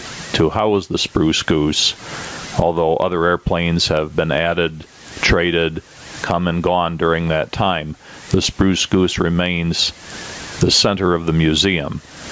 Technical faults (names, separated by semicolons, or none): gain pumping